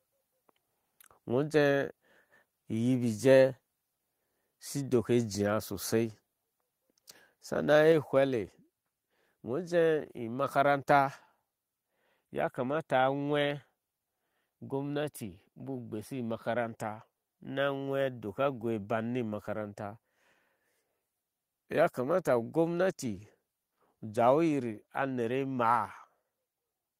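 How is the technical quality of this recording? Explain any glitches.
The recording has one glitch, a microphone volume step-down. At 7.92 s, the speech and the background drop together by about 4 dB in a single instant. The likely cause is the call software lowering the microphone's input volume after judging it too loud.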